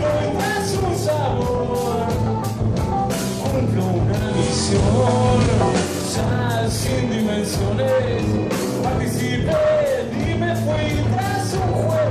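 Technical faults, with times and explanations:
4.23–5.95 s, digital radio blending to analogue: a 164 ms cross-fade to FM brings hiss about 20 dB below the signal and a waveform step of about 4 dB.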